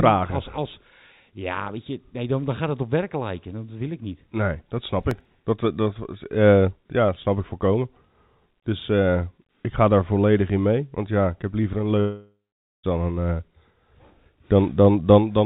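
Speech, carried over a G.711 mu-law call path with nothing above 4 kHz. From 5.03 to 5.25 s there is processor overload crackle. The processor missed a handful of deadlines on very short buffers, under a millisecond each. Each miss left a gap of silence with hard edges. Together they make a brief burst of crackle. After "ik heb liever een", at 12.0 s, a long network dropout is the likely cause of an 0.86 s gap. About 0.84 s of audio never arrives. The last sound is stretched into a fading buzz, then 0.48 s of silence. The speech resumes at 12.86 s without the lost part.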